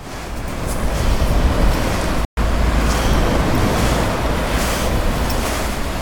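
At 2.25 s the audio cuts out abruptly in mid-flow and stays silent for about 120 ms, resuming at 2.37 s. The gap is plain silence rather than a fade, which marks it as a playback stall: the output stage stopped receiving samples for that interval. The likely cause is the player's buffer running dry or its audio thread being blocked briefly, leaving nothing to send to the output until it recovered.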